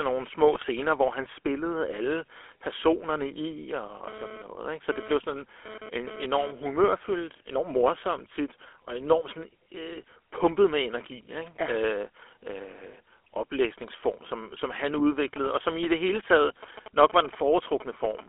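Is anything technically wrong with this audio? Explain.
Yes. The whole clip has been through the GSM full-rate codec, and it also has bit errors, phone buzz and signalling bursts.

GSM full-rate codec, throughout: the speech is rebuilt from a vocal-tract model driven by sparse, regularly spaced pulses, at a rate that fits 13 kbps. Only the telephone band of about 300 Hz to 3.4 kHz survives, and the voice has a plainly audible buzzy, gravelly roughness.

GSM bit errors, 0.53 to 0.66 s and 14.98 to 15.01 s: corrupted bits reach the decoder and distort the filter, pitch or gain values for a few frames. The speech breaks up into brief squawks, pops and gargling, with the longer burst first.

GSM phone buzz, 4.05 to 6.51 s: a nearby 2G handset is moving data in radio bursts about 217 times a second, and the audio circuitry rectifies them. The result is a hard, raspy 217 Hz buzz rich in harmonics, about 14 dB below the speech, unrelated to it, coming and going.

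GSM signalling bursts, 15.36 to 18.21 s: the handset sends only short groups of bursts, as when it is exchanging control messages with the network. After rectification these give a galloping dit-dit-dit of ticks and short 217 Hz buzzes, roughly 15 dB under the speech.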